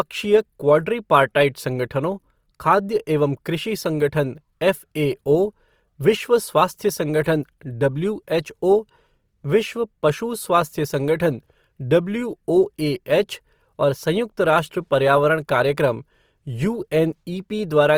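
Throughout the speech, grainy, rough texture is plainly audible, likely from Opus compression in its music (CELT) mode, which fits about 24 kbps. Energy fills every band, so it sounds noisy rather than swirling like MP3, and content still reaches 20.3 kHz.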